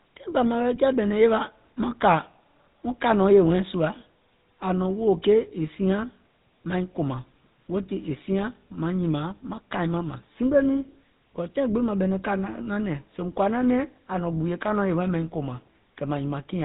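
Throughout the speech, GSM full-rate codec damage is plainly audible: pulse-driven vocal-tract coding leaves a buzzy, gravelly roughness, and nothing survives above 3.8 kHz, consistent with 13 kbps.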